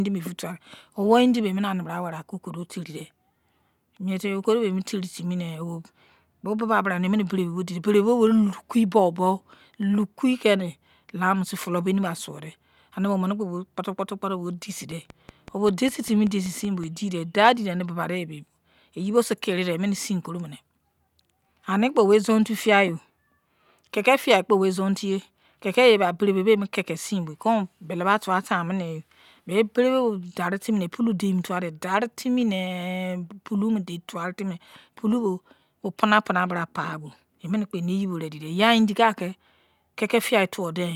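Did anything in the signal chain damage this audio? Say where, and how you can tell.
Yes. After "kputo bo deisei", from 14.91 to 16.85 s, a train of clicks sits over the speech. There are about ten of them, evenly spaced at 5.2 per second. They stand roughly 5 dB above the speech and tick through the pauses as well. Each click has much the same shape. The damage is likely in the analogue stage, from interference from nearby equipment or a faulty connection or power supply injecting a repeated pulse.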